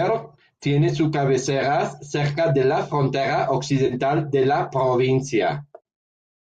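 Speech carries a brief AAC frame loss with concealment from 3.86 to 3.93 s, where about 40 ms of audio, consistent with four short low-delay frames, is patched from the last good spectrum. Unlike a dropout, it sounds smeared and phasey, not silent. Light roughness elsewhere likely comes from low-delay AAC coding.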